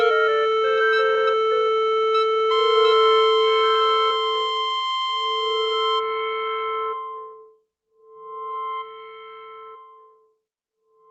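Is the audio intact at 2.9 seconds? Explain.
Yes, the sound is intact at 2.9 seconds, with nothing there beyond the ordinary coding of the call path it passed through.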